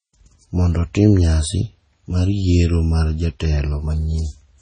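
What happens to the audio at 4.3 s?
Heavy MP3 compression, likely at a very low bitrate near 24 kbps, runs through the whole clip, so it is present at 4.3 s. Starved of bits, the encoder cuts everything above 9.4 kHz and drops weak frequency lines frame by frame, making the speech dull, watery and swirly with smeared onsets.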